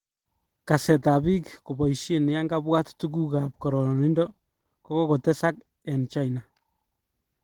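From start to finish the speech has a hoarse, muffled, grainy texture, and the damage is plain to hear. That's most likely Opus compression running short of bits. The encoder seems to be in its hybrid speech mode, and the coarse fill in the upper bands points to a low rate somewhere around 16 kbps. The bandwidth itself isn't squeezed, though; content reaches right up to about 20 kHz.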